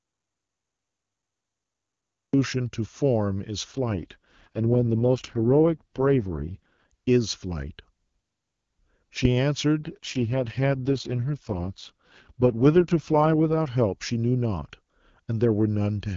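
From the very start of the clip until 2.34 s there is an audio dropout to silence. The input signal was likely lost, through a dropped connection or a mute, while recording carried on writing silence. The result is total silence with no room tone or background hiss underneath. Whatever was happening during that span is absent, and the speech comes in abruptly at 2.34 s.

Two AMR rate drops follow, at 3.71 to 6.92 s and again at 9.80 to 13.68 s. Both point to a weakening radio link, where the network pushed the AMR-WB codec down to a much lower bitrate so it could spend more capacity on error protection. Outside these stretches the wideband voice sounds clean, and the sound fits 23.85 kbit/s. Inside them the bandwidth stays the same and nothing cuts out, but the voice turns rough, raspy and synthetic, consistent with 6.6 kbit/s. It snaps back to clear speech when the rate recovers.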